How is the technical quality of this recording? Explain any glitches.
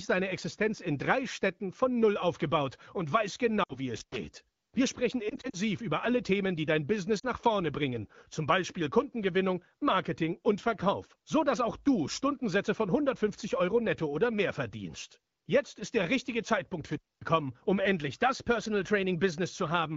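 The recording is wideband phone speech with light coding roughness. Five glitches interrupt it, of two kinds.

Lost AMR speech frames occur three times. The first is at 3.63 to 3.78 s, after "aufgebaut und weiß". About 60 ms is lost, which fits three 20 ms frames. The second runs from 5.29 to 5.56 s. There, about 100 ms of losses are scattered over 240 ms. The third is at 7.19 s, after "die dein" and before "nach vorne bringen zum". The decoder reuses the last good pitch and vocal tract settings while the gain falls. The shorter losses sound like a brief smeared dip or warble, and the first, longer run drops to near silence.

Intermittent contact causes two dropouts. The first runs from 3.97 to 4.17 s, open for about 110 ms. The second runs from 16.91 to 17.28 s, open for about 240 ms, just before "um endlich das". A loose connection opens for a moment. The sound cuts out, with crackle at each edge.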